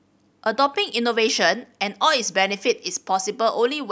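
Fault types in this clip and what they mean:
Nothing stood out on listening to this speech recording.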